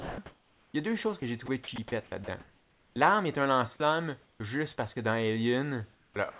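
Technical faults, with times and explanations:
0.00–0.18 s and 3.76–3.80 s, sound dropped by the voice detector: speech is lost, about 180 ms at the start and a brief 20 ms later, likely because the sender's voice detector judged it background and stopped sending. Steady hiss takes its place. On a spectrogram, speech energy gives way to smooth, even noise.
0.00–0.74 s and 4.24–4.40 s, comfort noise in place of the background: the real room background gives way to flat synthetic hiss, likely because transmission paused in a gap and the receiver generated filler. At 4.24 s it sits about 8 dB lower. The waveform shows a sudden level step, and the spectrogram shows uniform, textureless noise.
1.20–1.78 s, 2.06–2.96 s and 5.94–6.39 s, sound chopped by the voice detector: the detector likely toggled on and off repeatedly, replacing short stretches, 660 ms of the middle span, with filler. Speech sounds choppy. 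The spectrogram shows harmonics interrupted by blocks of smooth noise.
4.38–4.40 s, onset clipped by the voice detector: the first 20 ms of the returning sound is missing, likely because the detector reacted late, so it starts abruptly without a soft attack. In the waveform, the amplitude jumps straight from low hiss to full level. The band-limited call path, with nothing above 4 kHz, frames all of this.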